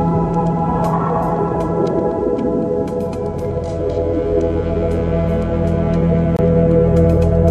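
A gap between stream segments falls at 6.37 to 6.39 s in this music. The timestamps of adjacent segments fail to meet, so the player inserts about 23 ms of silence. The result is a sharp-edged dropout, with no music actually lost.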